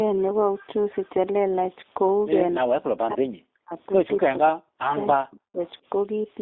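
G.729 codec, throughout: the whole clip carries the rough, slightly synthetic texture of this low-rate speech codec, which fits 8 kbit/s G.729A coding. Speech is rebuilt from a vocal tract filter, a pitch predictor and a few pulses per frame, and the line band runs only from about 250 Hz to 3.7 kHz, so the sound is thin and boxy.

Speech suppressed in double talk, from 2.6 to 3.75 s, 4.27 to 4.84 s and 5.14 to 5.6 s: the speech repeatedly dips or drops out in pieces, sinking by roughly 40 dB at its deepest. The likely cause is an echo canceller that, with both sides talking at once, could not tell this talker from loudspeaker echo and attenuated everything.

Echo leak, at 5.65 to 5.7 s: a brief, faint scrap of delayed speech comes back about 300 ms after the original, far below the main speech at roughly 35 dB down. This is likely loudspeaker pickup on the far end that its echo canceller failed to remove fully.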